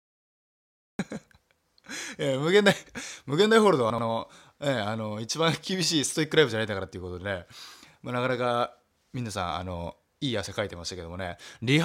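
A cut-off start: digital silence until 0.99 s, then the speech enters mid-sound with no natural attack, because the recording began late.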